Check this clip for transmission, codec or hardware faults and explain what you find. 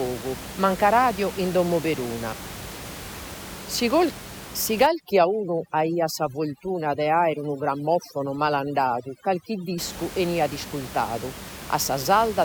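There's one fault here, overdone noise removal. From 4.87 to 9.78 s, a heavy-handed noise reducer mutes bands near its noise estimate, taking quiet speech detail along, so the background drops and breaks into twinkly specks. Outside that stretch, the room noise sits about 14 dB below the speech.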